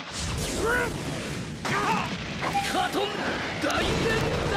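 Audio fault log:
0.1 to 4.57 s, word clock ticks: a sharp tick repeats roughly every 30 ms, around 150 in all, with uneven strength from one tick to the next. The receiving device runs on its own clock, unlocked from the sender's. At each slip a single sample is dropped or repeated, and a steady rate like this points to a mismatch of roughly 700 ppm. Unlike buffer-underrun clicks, the rhythm stays even and no audible gap opens.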